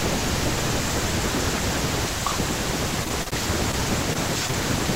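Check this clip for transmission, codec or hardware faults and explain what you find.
Two packet-loss faults are audible in the speech, both in the last two seconds. They sit on top of a call path whose band limit near 8 kHz fits Opus at about 20 kbps.

Repeated packet loss (robotic sound) runs from 3.03 to 3.33 s. Four separate gaps, the longest 45 ms, total about 120 ms, so roughly 40% of that span is concealment. Each gap is filled by extending the previous frame, which produces a choppy stutter with pieces missing.

Short concealed packet loss occurs at 3.71–3.75 s, 4.13–4.17 s, and twice back to back at 4.47–4.51 s and 4.51–4.55 s. Each drops about 20 ms of audio, which is patched by continuing the preceding pitch or shaped noise. Each one is heard as a brief smear or wobble.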